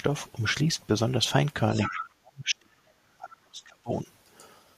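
In this speech clip, a second voice can be heard leaking through from 1.72 to 2.05 s, roughly 10 dB under the main talker. This is the other side's voice leaking through, likely loudspeaker echo the canceller left in the microphone signal. From 1.89 to 4.08 s the talker's own voice sinks, falling by as much as 40 dB over about two seconds. This is speech suppressed in double talk, likely from the canceller turning down both voices while they overlapped.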